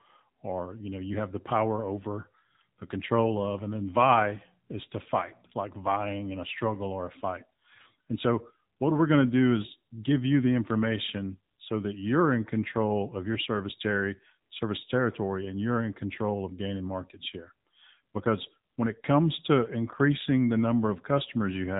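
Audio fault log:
throughout AMR narrowband mobile codec: speech stops above 3.8 kHz and turns buzzy and synthetic, unlike a plain low-pass filter. The coarse, pulse-driven voice fits a low 7.4 kbps mode.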